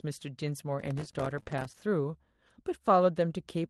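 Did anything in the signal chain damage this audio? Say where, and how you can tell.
Yes. At the network stage, lost packets were rebuilt from error correction at 0.43 to 0.49 s, 1.35 to 1.41 s and 1.47 to 1.65 s. The Opus decoder played low-bitrate copies carried in the following packets, so nothing drops out, but those stretches turn rougher and noisier.

In the driver and buffer stage, processor overload crackle runs from 0.80 to 1.83 s. Dozens of audio buffers, each around 3 ms long, missed their deadlines, and every miss left a hard-edged hole of silence. Together they form a gritty tearing over that second.

Also at the network stage, a short concealed packet loss at 1.43 s removed 20 ms of audio. The decoder bridged it by extending the preceding sound for about 17 ms before blending back, heard as a brief smear just ahead of the longer rebuilt stretch.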